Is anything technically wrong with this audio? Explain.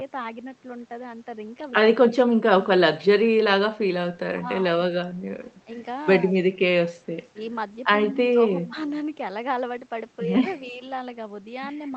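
Yes. The speech briefly ducks out three times, and a faint delayed echo slips through once.

Speech suppressed in double talk: at 4.3–4.46 s (a drop of about 20 dB), 5.09–5.17 s (about 15 dB) and 8.16–8.21 s (a slight dip of about 5 dB), the speech suddenly sinks. The likely cause is an echo canceller that could not separate its own talker from the loudspeaker echo and turned both down.

Echo leak: at 8.66–8.7 s, a scrap of the speech returns about 280 ms late and about 25 dB down, likely because the far side's canceller failed to remove its loudspeaker pickup.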